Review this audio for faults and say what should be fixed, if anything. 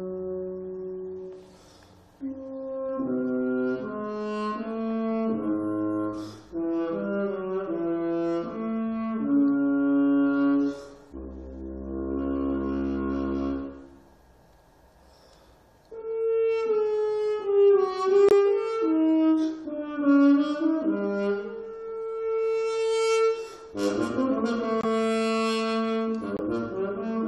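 Corrupt frame muted at 18.29–18.32 s, 24.81–24.85 s and 26.37–26.41 s. The decoder rejected damaged frames, and each gap of about 40 ms fits one dropped frame. Protect the stream with error checking, or conceal lost frames instead of muting them.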